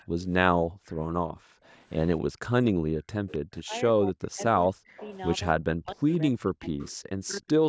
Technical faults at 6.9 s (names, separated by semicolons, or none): speech suppressed in double talk; echo leak